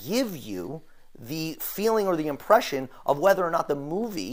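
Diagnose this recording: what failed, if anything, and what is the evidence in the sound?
The failure sits at the driver or buffer stage: periodic USB or driver dropouts. From 2.63 s to 4.23 s, around thirty ticks recur every 64 ms, about 15.6 per second. Each time, a sliver of audio well under a millisecond is skipped as a blocked transfer drops its chunk, and the waveform jumps straight to later samples. A waveform shows small step discontinuities. A spectrogram shows evenly spaced thin vertical broadband lines, visible only where signal is present.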